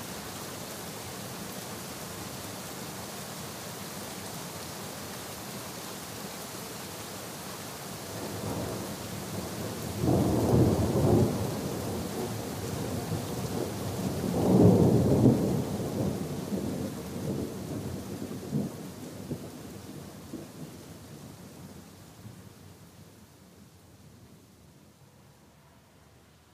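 No faults can be heard anywhere in this recording.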